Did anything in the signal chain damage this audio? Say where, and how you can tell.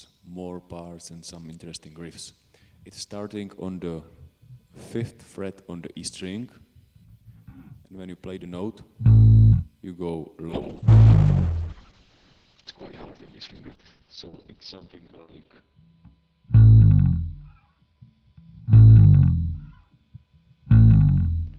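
Yes, a call bitrate drop at the codec stage from 10.51 s to the end. The sound turns rough and muffled, which fits the encoder falling from 32 to 6 kbps. A spectrogram shows the top edge collapsing from 20 kHz to 6 kHz.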